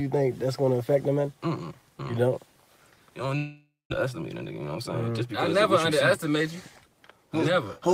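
At 3.37 s the sound breaks off, and for the next half-second or so the last moment is drawn out into a buzzy, hiss-like continuation that fades away, leaving a short stretch of near-silence before the audio returns at 3.94 s, with about 400 ms of material simply gone. This is likely a long network dropout: packets stopped arriving, the receiver's concealment filled the gap for as long as it could, then gave up.

From 4.06 s to 5.99 s the audio runs slightly fast, about 105% of normal speed, with the pitch unchanged, giving it a faintly rushed, compressed feel. This is a jitter buffer speed-up. The buffer was holding more audio than its target. The receiver trimmed many small pitch-period-sized slices, around a tenth of a second in total, to catch up.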